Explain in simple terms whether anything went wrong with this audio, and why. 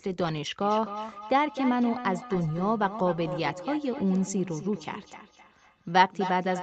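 Something did go wrong. From about 0.61 s until the end of the clip there is a feedback echo between two devices. Two devices in the same room were on one call, so one speaker played the sound back into the other's microphone, and neither echo canceller removed it. Each stretch of speech comes back roughly every third of a second, thinner and more ringing, and the repeats are quieter than the speech itself.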